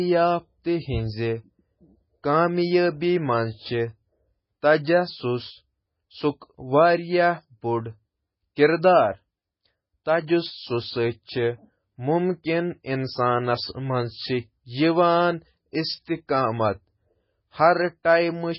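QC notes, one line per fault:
Throughout: MP3 compression. The speech has nothing above 5.6 kHz, so sibilants lose their top and sound dull and lispy. Heavy artefacts remain: a watery, swirling texture on sustained sounds, metallic chirps on s sounds, and smeared consonant attacks. This is likely a starved MP3 encoder, consistent with a very low bitrate around 16 kbps, which cuts the treble at a fixed point and lets weak frequency lines switch on and off between frames.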